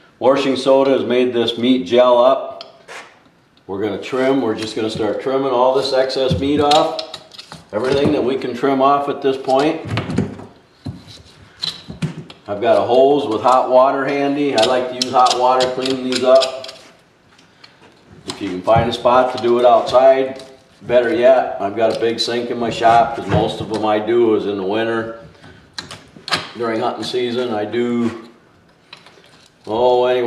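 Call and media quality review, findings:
Nothing stood out on listening; no issue to log for this recording.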